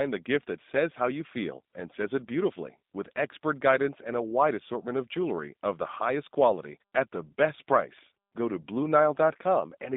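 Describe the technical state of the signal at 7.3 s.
At 7.3 s the G.729 codec damage is present, as it is throughout. The speech is rebuilt from a filter and sparse pulses, which fits 8 kbit/s. It sounds rough and synthetic, with nothing above 3.7 kHz.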